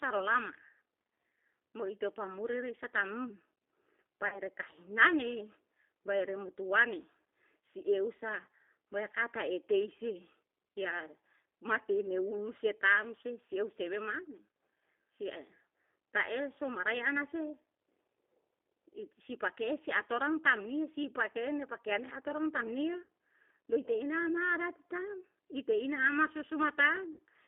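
Throughout, the speech carries G.729 codec damage: the sound sits in a narrow 300 Hz to 3.4 kHz line band at 8 kbit/s and is plainly rough and synthetic. That rough, synthetic quality, rather than mere muffling, separates it from simple telephone band-limiting.

VoIP packet loss concealed by the speech codec occurs at 4.28 to 4.39 s (about 40 ms lost), at 23.03 to 23.09 s just after "atoran tam ni a" (about 60 ms), and at 27.13 to 27.19 s (about 60 ms). The decoder stretches its last sound into a fading buzzy tone or coloured noise, and the voice stays weak briefly afterwards.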